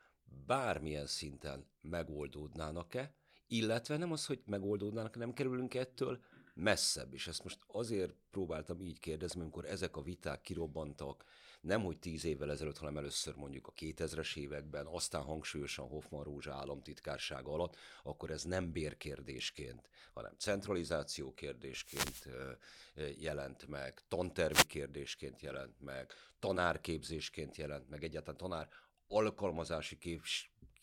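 A speech recording with two wireless microphone noise hits, from 21.81 to 22.28 s and from 24.50 to 24.67 s. Each is a brief swish of static as the analogue FM radio link fades, its reflections cancelling so the receiver's own noise rises. Unlike a digital dropout, which leaves silence or a stutter, these fill the gap with hiss, and unlike a cable crackle they swell and recede.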